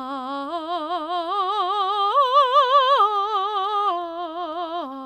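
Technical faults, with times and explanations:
3.02 to 4.63 s, block size mismatch (truncated): the music picks up a steady buzz at about 43.1 Hz. One stage is handing over longer blocks than the next one reads, so the tail of each block gets dropped, and that regular chop at the block rate is what you hear as the buzz. The rate fits 1024-sample blocks. The music keeps its normal pace and pitch through the stretch.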